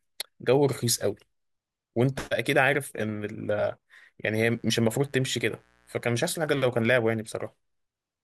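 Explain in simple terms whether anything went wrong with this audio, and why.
A faint, raspy mains buzz runs from 4.27 to 6.21 seconds, caused by electrical interference from a 60 Hz power supply leaking into the recording.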